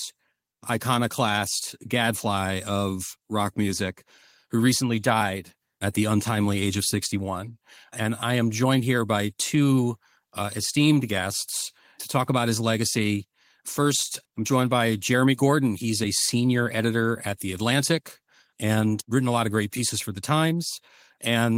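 Nothing in the audio stood out as a technical problem on listening.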